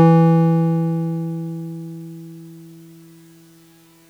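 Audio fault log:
Throughout: doubled audio track. The music is heard twice, with a second full-band copy trailing the original by roughly 0.7 s and sitting about 5 dB lower. The late copy carries no decay or room colour, so it reads as a hard, detached repeat rather than an echo. Its likely cause is the signal being captured again over a slower path, or an edit that left two copies out of alignment.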